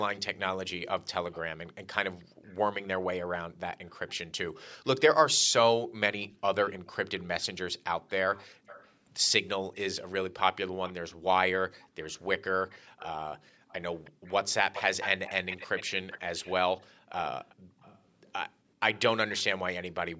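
From 1.32 to 2.51 s there's a faint copy of the speech trailing 320 ms behind, most likely an echo leak from a speakerphone whose canceller let some through. It returns very faintly at 3.87 to 4.1 s, then much more clearly from 6.21 to 19.43 s. Around 2.27 to 2.48 s, and again briefly at 8.55 to 8.65 s, the room sound drops by about 40 dB. That's background gated by the echo canceller clamping the mic while the far side was playing.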